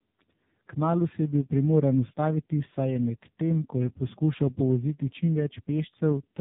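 Throughout, the speech sounds rough, muffled and warbly, with nothing above 3.8 kHz. This is tandem speech coding. Two speech codecs ran in series, with artefacts pointing to iLBC followed by AMR-NB, so the second re-coded the first's already damaged output.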